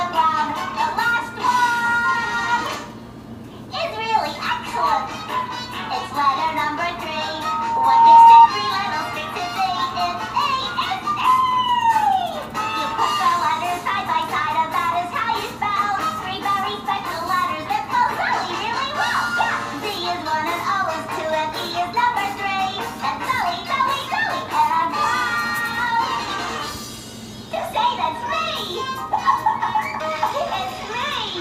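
From 7.33 to 8.48 s, a 921 Hz tone swells within a second into a squeal about 15 dB above the sound: loudspeaker feedback squeal, where the microphone re-amplifies its own loudspeaker.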